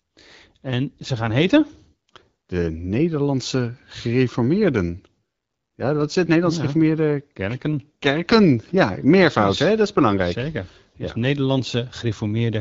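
No faults found in the speech; the audio sits on the AMR wideband (HD Voice) path, with the top capped near 7 kHz and the light coding texture expected of the 12.65 kbit/s mode.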